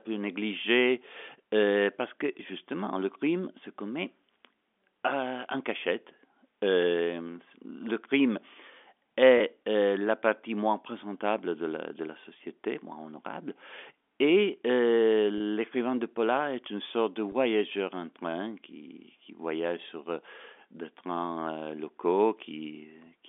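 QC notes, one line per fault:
9.38–9.40 s, 15.38–15.40 s and 17.32–17.34 s, packet loss with pitch repetition. About 20 ms of audio drops out each time, which fits two short packets lost in a row. The receiver fills each gap by replaying the last pitch period. The sound briefly holds on one pitch and turns slightly buzzy. The gaps are short, so it never fades to silence. The telephone-band G.711 coding underneath stays intact through these moments.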